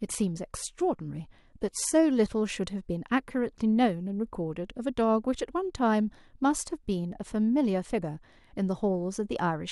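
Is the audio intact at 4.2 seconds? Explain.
Yes, at 4.2 seconds the audio is intact, with no fault to be heard at that point.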